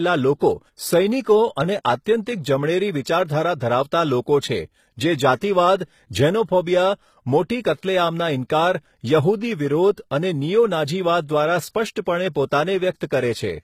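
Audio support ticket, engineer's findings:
Throughout: nothing above 14.9 kHz. Two distinct artefact signatures are stacked, unlike a single codec. Likely transcoding between lossy codecs, pointing to AAC-LC followed by low-rate HE-AAC.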